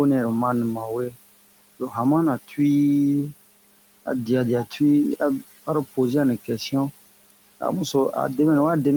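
Noise suppressor artifacts run through the whole recording. The suppressor cuts steady room noise by about 17 dB, so noise dips between phrases and swells under speech.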